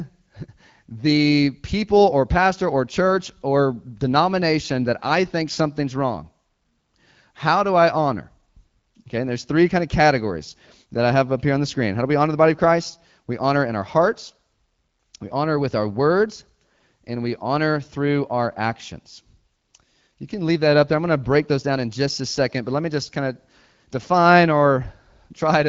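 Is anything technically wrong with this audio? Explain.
No, the speech has passed through an AMR wideband (HD Voice) codec at 12.65 kbit/s, a rate at which that codec leaves only light coding damage, and nothing else in the signal points to a technical fault.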